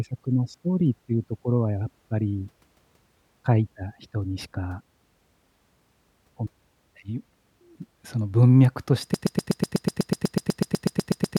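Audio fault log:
9.14–11.38 s, broken-record loop: the speech locks into a rapid stutter, one 0.12 s fragment repeating exactly, back to back, 18 times through to the end. Likely a stalled player or stream kept resending its last fragment, so the intended audio is lost.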